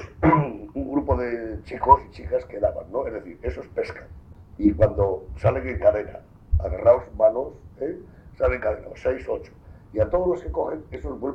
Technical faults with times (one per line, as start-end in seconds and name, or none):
none